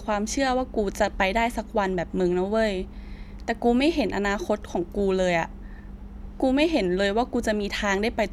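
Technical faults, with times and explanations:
No technical faults detected.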